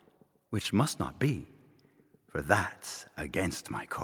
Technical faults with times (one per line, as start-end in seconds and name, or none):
none